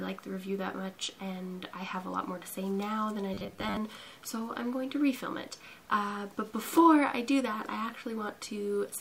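From 3.34 to 3.77 s the sound turns into a rigid, metallic buzz. This is robotic sound from repeated short buffers. The buzz sits at a fixed 100 Hz, which matches a 10 ms slice being replayed over and over. The likely cause is new audio arriving too seldom. The software then fills each gap by repeating the last slice. About half of this stretch is repeated material, so the real audio underneath is partly skipped.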